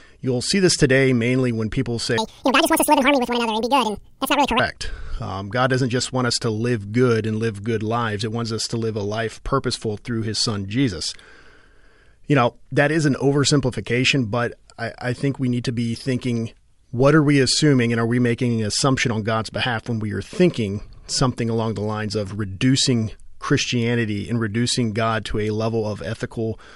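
From 2.18 to 4.60 s, right after "today mainly when people", the speech jumps up a full octave and runs at double speed, a wrong sample rate fault. The samples are clocked out at twice the rate they were captured, which fits 24 kHz audio played at 48 kHz with no conversion. Pitch and tempo rise together by exactly 2.0, unlike a pitch shift, where timing holds, or a time-stretch, where pitch holds.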